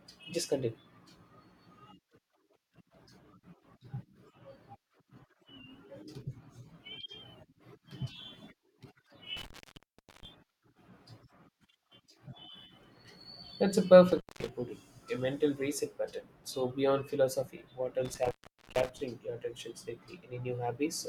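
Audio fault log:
9.37–10.25 s, 14.12–14.49 s and 18.05–19.01 s: intermittent contact. A loose connection briefly opens, dropping the speech for about 0.73 s, 0.19 s and 0.45 s. Crackle marks each break and join, with faint hiss in the gaps. The last falls between "beyond philosophy what" and "your attention".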